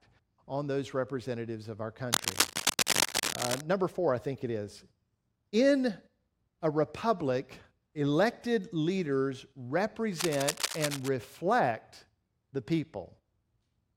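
Speech, with cable scratch noise from 2.13 to 3.61 s at roughly the level of the speech, and from 10.14 to 11.09 s somewhat quieter. Unlike steady hiss or isolated clicks, these are dense, uneven rustling bursts, likely from a worn cable or connector being moved.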